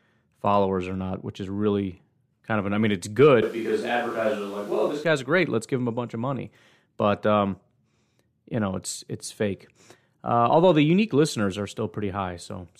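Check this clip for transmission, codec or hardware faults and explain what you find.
One fault here. From 3.43 to 5.04 s there's a switch to a distant microphone. The speech abruptly goes roomy and hollow, thinner in the bass, about 5 dB quieter, with room noise roughly 30 dB below it, then snaps back. Most likely the close mic dropped out and a farther one covered that stretch.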